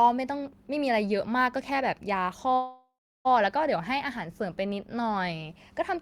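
A call audio freeze runs from 2.55 to 3.27 s. The last sound trails off as a fading buzz, then 0.34 s of silence, likely from delayed packets draining the jitter buffer. Speech resumes where it stopped, nothing lost, but now 0.7 s late.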